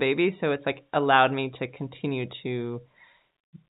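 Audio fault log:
Nothing goes wrong anywhere in this speech clip; it simply comes over a call path that keeps everything below 4 kHz, which fits a standard 64 kbps phone-grade codec.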